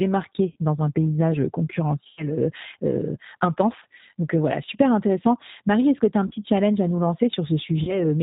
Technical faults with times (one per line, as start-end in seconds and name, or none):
0.00-8.22 G.729 codec
0.52-0.56 VoIP packet loss concealed by the speech codec
2.07-2.29 VoIP packet loss concealed by the speech codec
3.80-3.84 VoIP packet loss concealed by the speech codec
6.27-6.33 VoIP packet loss concealed by the speech codec
7.83-8.03 VoIP packet loss concealed by the speech codec